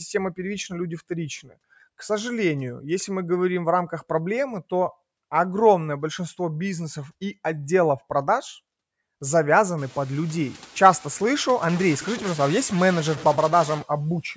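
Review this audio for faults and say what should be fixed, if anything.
A stuck bit, likely one converter or data line held at a fixed value, corrupts samples from 11.69 to 13.82 s, producing distortion and noise filling the pauses. Testing converter and interface data lines and monitoring bit activity would prevent it.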